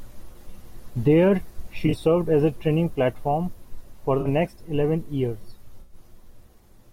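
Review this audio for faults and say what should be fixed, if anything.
Corrupt frames concealed at 0.32–0.37, 1.86–1.94, 4.21–4.27 and 5.81–5.95 s: the decoder caught damaged AAC frames and muted or smeared them. Spectrograms show brief faded vertical bands, and waveforms show smooth amplitude troughs. Protect the stream with error-resilient transport or retransmission so frames arrive intact.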